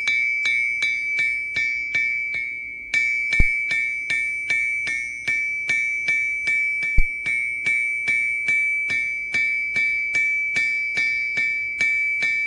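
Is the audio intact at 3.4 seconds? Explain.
No. From 3.40 to 3.50 s a phantom power thump, a supply switching on a live input and pushing a step through the coupling capacitors, gives a deep low thud peaking near -3 dBFS that dies away over about 22 ms. A sharp broadband click would carry no such low-frequency decay.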